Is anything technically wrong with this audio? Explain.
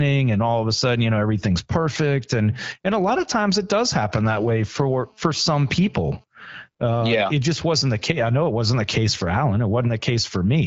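Yes. From 4.26 to 6.24 s there is GSM phone buzz. A nearby 2G phone's 217 Hz radio bursts are rectified, causing a steady, raspy buzz about 34 dB below the speech.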